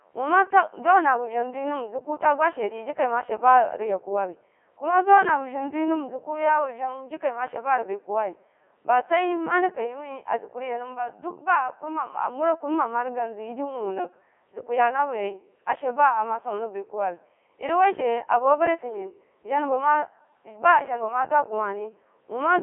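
The whole clip passed through a Codec 2 vocoder, likely around 3.2 kbit/s, rebuilding speech from sine waves, so it sounds robotic and buzzy, confined roughly to 300 Hz–3.4 kHz.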